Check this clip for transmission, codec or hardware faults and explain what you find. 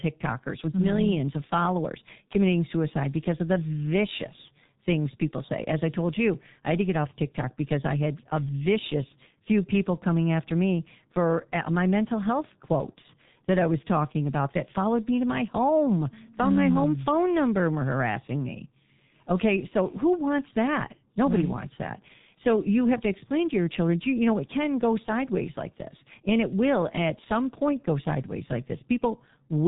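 The speech carries one fault throughout: heavy G.723.1 codec damage. Nothing survives above 3.8 kHz, and the voice sounds muffled and hoarse with smeared consonants, which fits a bitrate around 6 kbit/s. Its coarse 30 ms frames update the voice model sluggishly, so the hoarse roughness sets it apart from a simple low-pass filter, which would dull the sound without degrading the voice itself.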